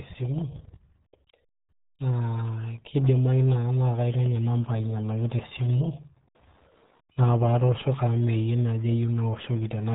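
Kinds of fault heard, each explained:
RealAudio 14.4 codec, throughout: the speech has been squeezed through a very low-rate dial-up-era codec, and the heavy, muffled, gargly smearing fits an 8 kbit/s stream. Nothing passes above 3.8 kHz, so the crisp upper detail of consonants is simply gone.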